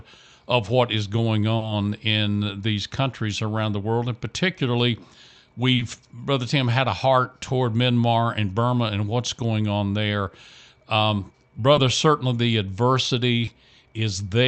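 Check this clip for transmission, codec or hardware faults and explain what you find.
Four brief smears break into the speech, each a short wobble where the audio glosses over a gap. These are short concealed packet loss events: audio arrived too late for the decoder, so the receiver extended the preceding sound to fill the hole before blending back into the real signal.

The first falls at 1.57 to 1.63 s, between "of what is going" and "in these countries around", and the second at 5.75 to 5.81 s. Each stretch of concealment is about 40 ms. The third, at 11.73 to 11.77 s just before "certainly the", and the fourth, at 13.45 to 13.49 s, are shorter, about 20 ms each.

The top end of the sound stops near 8 kHz, which fits an Opus call codec at a wideband setting.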